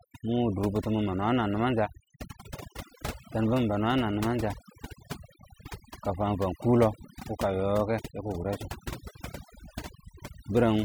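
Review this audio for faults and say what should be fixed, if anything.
Overdone noise removal runs through the whole speech clip. The reduction was pushed hard enough that individual frequency bands sitting close to the noise estimate are pulled down or switched off, taking the quieter parts of the voice with them. Between phrases the background drops and breaks up into twinkling specks. Unlike a noise gate, which mutes everything at once, this thins the sound band by band. To prevent it, apply gentler reduction and compare the processed voice against the original.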